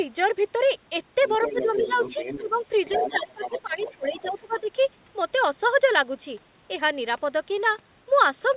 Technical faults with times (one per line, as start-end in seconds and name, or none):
1.22-2.49 other side's voice leaking through
1.51-1.97 speech suppressed in double talk
2.39-2.58 speech suppressed in double talk
2.86-4.30 other side's voice leaking through
2.95-4.69 speech suppressed in double talk